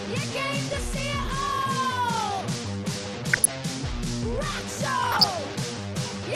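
DAB burbling shows up at 0.73–0.84 s, 3.24–3.53 s and 5.03–5.36 s: short blips of noise in single sub-bands where bit errors slipped past error correction, and wrong scale factors make individual sub-bands jump in level for up to a frame. The error rate climbs from a fraction of a percent to under one percent, and the bursts get longer.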